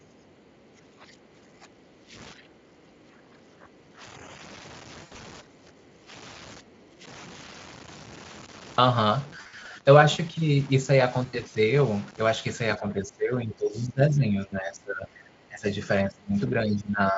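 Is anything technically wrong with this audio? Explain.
Yes, there are four kinds of fault.

Low bit depth without dither runs through the whole clip. The quietest parts turn grainy and sputter, and a gritty distortion that follows the speech sits roughly 20 dB below it. The likely cause is truncation to very few bits without dither, which fits about 7 bits, so the rounding error tracks the signal instead of becoming steady hiss.

Speech suppressed in double talk occurs at 0.00–0.24 s, 0.73–2.15 s, 2.34–4.01 s, 5.41–6.11 s, 6.60–7.04 s and from 12.77 s to the end. The speech dips by about 15 to 20 dB and thins. This is likely an echo canceller turning down the near talker while the far side is active.

The other side's voice leaks through from 0.03 to 0.65 s. A second voice is heard very faintly, far below the main speech. Its likely cause is the echo canceller leaving some of the far side's voice, played on a loudspeaker, in the microphone signal.

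VoIP packet loss concealed by the speech codec occurs at 5.03–5.21 s, 9.41–9.67 s and 11.25–11.41 s. The first spans 120 ms of audio lost over 160 ms, with the longest gap 80 ms. The second spans 140 ms lost over 240 ms, and the third 80 ms. The decoder stretches the last sound into a fading buzz, and the speech stays weak briefly afterwards.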